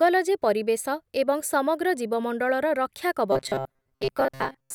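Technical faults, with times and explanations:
3.32 to 4.74 s, robotic sound from repeated short buffers. Speech becomes a metallic 133 Hz buzz, likely from a 7.5 ms chunk replayed over most incoming audio.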